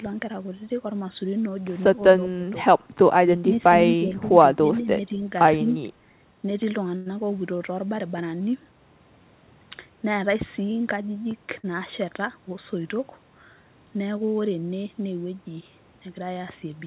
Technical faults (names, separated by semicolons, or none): speech suppressed in double talk; short stall from a late packet; burst of packet loss